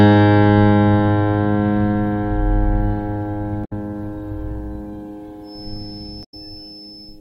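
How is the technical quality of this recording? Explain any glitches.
The recording has two kinds of fault. Damaged data in the compressed stream breaks the music twice. A feedback whistle sits under the final stretch.

The first data fault runs from 3.61 to 3.73 s. The second runs from 6.21 to 6.34 s. Each lasts just over a tenth of a second. Part of the compressed stream was corrupted at these points. The decoder could not read those frames and lost its place. It then hunted for the next valid frame header. Each break is heard as a brief glitch in the music.

From 5.41 s to the end, a thin, steady whistle at 5.3 kHz rides behind the music. It sits roughly 20 dB below the music and wavers a little in level. The likely cause is a loudspeaker-to-microphone loop held just at the edge of feedback. One high frequency keeps ringing without building up or running away.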